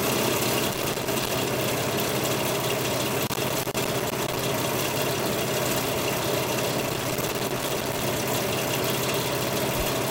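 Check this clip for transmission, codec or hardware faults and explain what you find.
Loose connector crackle appears three times in this recording of everyday sound: 0.71 to 1.31 s, 3.26 to 4.45 s and 6.80 to 8.03 s. A worn or dirty contact keeps making and breaking as it shifts, chopping the signal on and off in quick succession. Each burst is an irregular run of scratching crackle. Unlike evenly spaced digital clicks or dropouts, the spacing within each burst is uneven.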